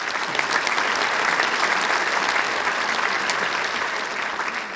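There are no technical faults to describe; the sound simply carries the normal call microphone processing, with nothing above 8 kHz.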